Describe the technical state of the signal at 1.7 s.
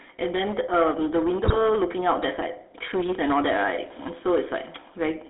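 At 1.7 s the signal sits just after a burst of GSM bit errors running from 1.44 to 1.68 s. Corrupted filter, pitch and gain values turned each affected frame into squawks and gargling, with six frames hit. On a spectrogram this shows as smeared, misplaced energy and sudden level jumps, ending just before 1.7 s.

Hard clipping is present here as well. The level drives about 8 dB past what the chain can pass, so peaks are sheared off flat, roughly 7 percent of samples. The waveform shows squared-off tops, and the spectrogram shows added harmonic haze above the formants, heard as harsh fuzz on loud syllables.

The GSM full-rate codec also shapes this moment. The speech is rebuilt from a vocal-tract filter excited by sparse regular pulses, which fits a 13 kbps GSM stream. That gives a buzzy, gravelly roughness. The spectrogram shows a band limited to about 300 Hz to 3.6 kHz, with empty regions above and below.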